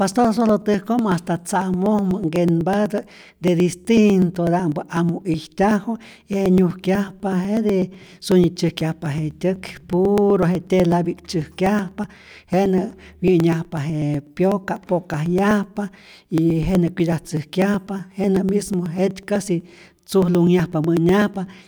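From 0.12 s to 21.59 s the speech carries periodic USB or driver dropouts: every 0.12 s, about a millisecond of audio is skipped as a recurring stall interrupts the stream. Around two hundred regular ticks result, audible only while there is signal.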